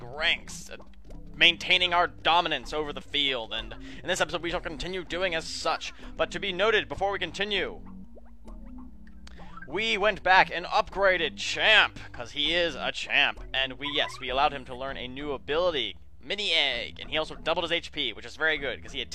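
No technical faults can be heard anywhere in the recording.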